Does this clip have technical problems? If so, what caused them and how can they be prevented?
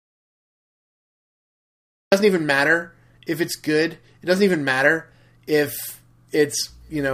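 Yes. The input path was most likely interrupted from the very start, through a disconnected device, a failed link or an unintended mute, while the recorder kept writing zeros. This produces an audio dropout to silence: from 0.0 s to 2.12 s the clip is completely silent, with no room tone or noise floor at all, and the speech then comes in abruptly mid-flow, so whatever was said in those first two seconds is lost. To prevent it, secure connections and check input meters and mute states before and during recording.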